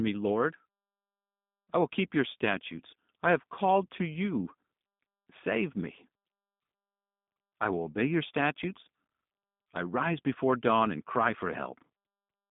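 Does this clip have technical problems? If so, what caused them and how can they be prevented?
Yes. Throughout, the speech sounds rough, slightly synthetic and dull, with nothing above 3.7 kHz: G.729 codec damage, which fits an 8 kbit/s coder rebuilding speech from sparse pulses. Prevent it by using a wideband, higher-bitrate codec for the call or recording.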